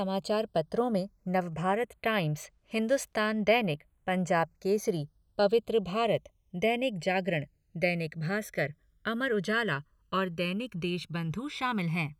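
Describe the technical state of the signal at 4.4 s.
At 4.4 s the speech carries channels drifting apart, present across the whole clip. The two sides run on clocks that disagree by roughly a hundred parts per million, so the inter-channel delay keeps growing, to around a millisecond by the end. Heard in mono, the resulting comb notches glide slowly through the spectrum as a slow flanging. Unlike a fixed channel offset, the colouring keeps moving, and unlike an effect flanger it drifts one way without sweeping back.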